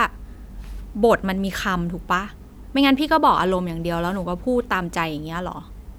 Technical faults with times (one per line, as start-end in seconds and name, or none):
none